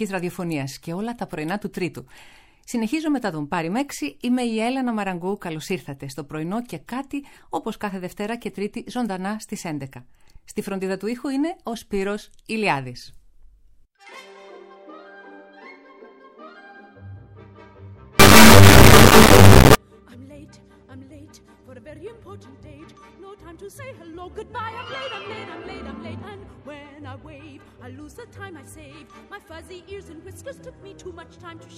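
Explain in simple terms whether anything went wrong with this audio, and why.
From 18.20 to 19.75 s, an integer read as float fault turns the sound into a harsh, extremely loud buzzing square wave. The whole-number samples were misread as decimal values.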